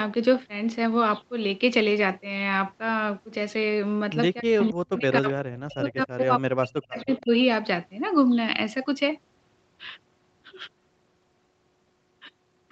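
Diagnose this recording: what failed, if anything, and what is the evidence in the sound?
Between 4.4 and 7.33 s the speech level drops in patches, by about 40 dB at its deepest. Around two seconds in total are affected. The stage is call processing. The likely cause is speech suppressed in double talk: the echo canceller ducked the near talker while the far side spoke.

Two faint delayed copies of the speech appear, at 4.62 to 4.7 s and 6.99 to 7.2 s. Both trail the original by 266 ms and sit roughly 25 to 30 dB below it. This is likely echo leak from a loudspeaker end whose echo canceller missed residual pickup.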